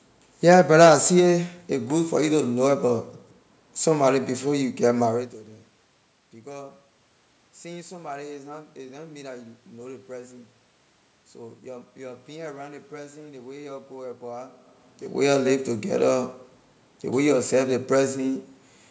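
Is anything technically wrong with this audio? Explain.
No, nothing here points to a technical fault.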